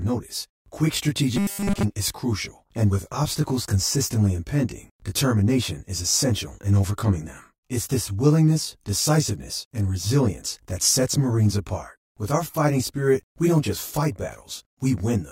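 Throughout the clip, one channel runs late by roughly 20 ms relative to the other, and the two are summed to mono. This channel delay causes comb filtering: the content common to both channels cancels at a series of evenly spaced frequencies, starting near 30 Hz and repeating closely up the spectrum. The speech sounds rough and slightly doubled, with a fixed colouring that stays the same whatever is being said.

From 1.36 to 1.83 s, new audio likely arrives too seldom, and the playback fills each gap by repeating the last short buffer while the real signal is skipped. This robotic sound from repeated short buffers replaces most of the audio in that half-second, roughly 70% of it. Each loop forces a steady 200 Hz buzz, which fits a buffer of about 5 ms. The voice becomes a rigid, metallic drone that only loosely tracks the speech.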